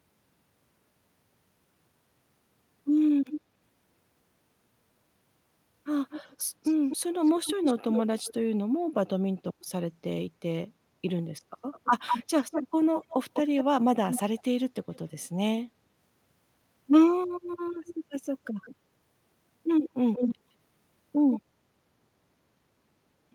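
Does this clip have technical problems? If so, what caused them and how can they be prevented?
Yes. Echo leak, likely from a far end playing the call on a loudspeaker while its echo canceller let part of the pickup return, puts a delayed copy of the voice under the speech at 3.25–3.41, 6.1–8.34, 11.72–14.98, 17.52–18.75, 19.86–20.35 and 21.31–21.4 s. The copy trails by 243 ms early, 203 ms mid-clip and 161 ms later. It is mostly clearly quieter, faint at 17.5 s and nearly as loud as the voice at 19.9 s. Using a headset, or a properly tuned echo canceller, at that end would prevent it.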